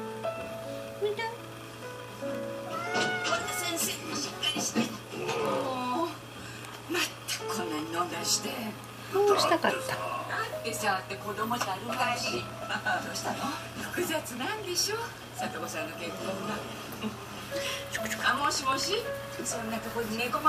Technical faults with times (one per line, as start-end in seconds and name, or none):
none